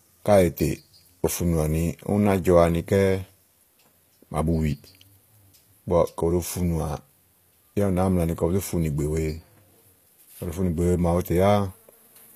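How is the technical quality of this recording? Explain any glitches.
The technical quality is compromised by plainly audible codec damage throughout the speech. HE-AAC compression, across the whole clip, is the likely cause. Only the lower spectrum is coded, and the treble is rebuilt by copying lower bands upward, which fits a low bitrate around 24 kbps. The upper range, cut off above 15 kHz, doesn't match the real harmonics, so s sounds come out gritty, metallic or lispy.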